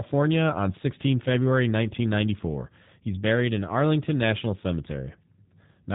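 It's a speech clip run through the G.729 codec for its whole length, and you can plainly hear it: nothing above 4 kHz, plus a rough, synthetic edge from speech rebuilt out of a vocal tract filter, pitch predictor and sparse pulses, which fits 8 kbit/s G.729A.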